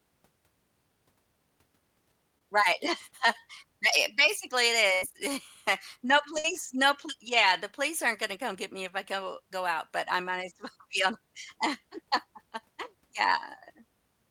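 Short concealed packet loss at 2.38 to 2.42 s: about 20 ms of audio never arrived, and the receiver patched it by extending the previous sound, leaving a brief smear. Bursts of packet loss at 4.94 to 5.03 s and 6.39 to 6.45 s: consecutive packets went missing, about 90 ms and 50 ms, so the last sound is stretched and fades before speech resumes with that stretch gone.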